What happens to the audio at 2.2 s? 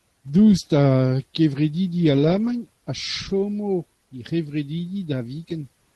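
Eleven separate packets were lost between about 2.11 and 2.53 s, and the Opus decoder filled them from the low-bitrate backup copies carried in the following packets. This is a lost packet rebuilt from error correction: there's no gap, but that stretch sounds rougher and noisier.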